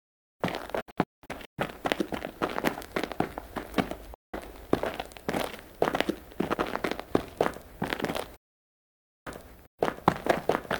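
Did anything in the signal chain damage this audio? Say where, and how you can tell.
Yes, digital broadcast dropout at the reception stage: 0.81–1.59 s (scattered holes, longest 192 ms), 4.14–4.34 s, and 8.36–9.27 s. Each mute enters through an 8 ms fade and is true silence, not a concealment smear or crackly analogue cut.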